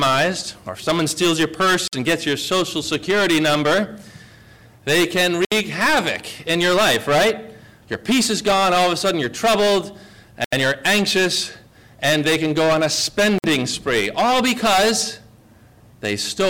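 Hard clipping runs through the whole clip. The signal is driven about 16 dB past what a stage can pass. Roughly one sample in seven is cut flat. The flat tops add high harmonics, heard as a harsh fuzz on every loud moment.

Four short dropouts follow, at 1.88, 5.45, 10.44 and 13.38 s. Each cuts to silence for 53, 67, 81 and 55 ms, then resumes. This is likely a Bluetooth stall: the headphones' buffer ran dry while resent packets were awaited.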